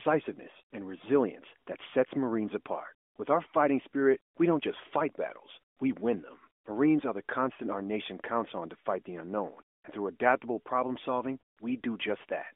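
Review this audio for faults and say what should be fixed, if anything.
Nothing here needs fixing, as no faults can be heard in the speech. It has the narrow 250 Hz to 3.5 kHz band of an AMR narrowband mobile codec path, which points to the 12.2 kbps mode, with only light coding texture on the voice.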